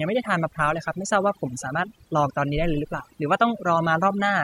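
From start to end the speech carries overdone noise removal: an aggressive noise reducer gated individual frequency bands whenever they neared its noise estimate, leaving near-silent gaps with twinkling specks. A spectrogram shows a blotchy, holed texture with isolated bright dots between syllables.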